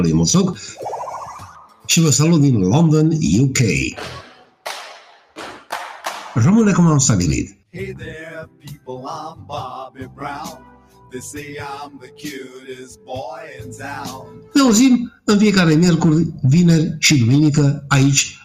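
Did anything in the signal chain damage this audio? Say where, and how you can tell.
Yes. The damage sits in the call-processing stage: a speech-tuned noise suppressor applied to music or sounds stays active throughout, treating steady tones, ambience and tails as noise. Gain swings by about 5 dB, so sustained material pumps and thins while attacks pass.

Sound cut by the noise suppressor is clearest at 1.41–1.88, 4.22–4.65, 5.0–5.38, 8.48–8.88, 9.9–10.19, 10.57–11.14, 11.94–12.21 and 14.22–14.54 s. Held or decaying sound sinks by about 9 to 12 dB there and its decay is cut short.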